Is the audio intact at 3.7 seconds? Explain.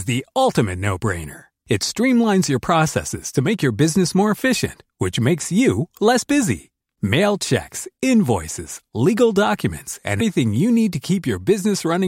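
Yes, the audio is intact at 3.7 seconds, with no dropout, click, distortion or other fault audible at that point.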